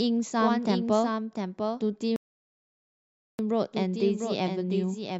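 From the start, a doubled audio track runs underneath: a full-band copy roughly 5 dB quieter trails by about 0.7 s, likely a second capture path, with no decay or room colour as an echo would have. From 2.16 to 3.39 s a rebuffering stall cuts to silence for 1.23 s. Unlike a dropout, the sound then resumes exactly where it stopped, adding time without losing anything.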